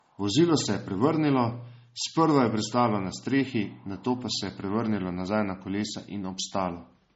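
From start to finish, the speech carries the smeared, swirly quality and thinned top end of heavy MP3 compression, even though the file itself is encoded at a high rate. This is most likely low-bitrate audio saved at a high bitrate: an earlier MP3 pass at around 32 kbit/s discarded detail, and re-encoding near 200 kbit/s only preserved those losses. The room noise, about 47 dB below the speech, is part of the recording.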